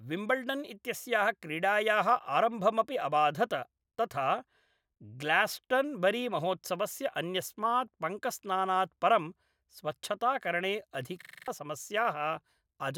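From 11.22 to 11.48 s, after "अन्यस्मात् पङ्कस्नानात् परं स्वच्छताकरणे", a system hang loop replays one 43 ms buffer (fits 2048 samples) six times: a 23.4 Hz stutter, with identical repeating waveform blocks.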